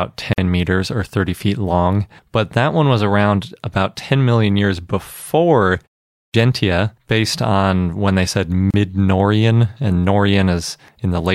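At 0.33 s the speech breaks off for about 47 ms, a sharp hole with blurred edges, and resumes exactly where it left off with "meters or". This is a gap at a join of encoded pieces. The audio was encoded in separate segments and then butted together untrimmed, so the encoder's start-up delay and the padding of the previous segment's final frame survive as silence in the middle of continuous speech.

At 6.10 s, after "million years before" and a pause of about 0.3 s, the next phrase starts abruptly, with its opening 0.24 s or so missing, so the first sounds are gone up to 6.34 s. This is a clipped start after a pause. The output device had gone idle during the short silence and needed that time to wake or relock before passing audio, and meanwhile the leading part of the phrase was discarded.

At 8.71 s, right after "on when they said", the same join gap returns, this time a dropout of about 33 ms lasting to 8.74 s, again a leftover of encoder delay and frame padding where two separately encoded pieces meet.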